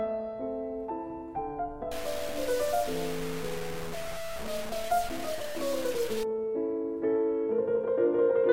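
From 1.92 s to 6.23 s the audio turns coarse and grainy, with a rough distortion that rises and falls with the sound itself. Quieter passages sputter or drop out between steps, and the grit sits only about ten decibels below the signal. This is low bit depth without dither, likely from truncation to very few levels, which fits about 5 bits, so the rounding error tracks the waveform.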